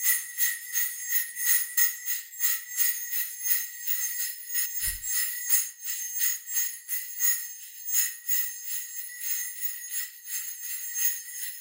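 Short blips at 1.77 s, 4.65 to 4.67 s, 7.13 s and 8.99 s come from damaged data in a compressed stream. At each spot the decoder hits corrupted bytes, misreads the frame and loses sync, so the sound briefly glitches.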